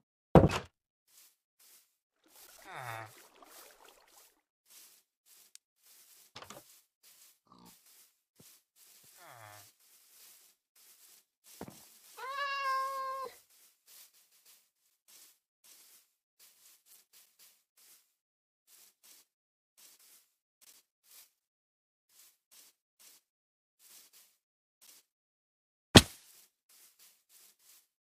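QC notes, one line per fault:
16.91–16.95 s, damaged data in a compressed stream: a short glitch lasting about 36 ms. A stretch of the compressed data here is corrupt, so the decoder misreads or rejects those frames, loses its place in the stream and hunts for the next valid frame header. The garbled decode gives the glitch.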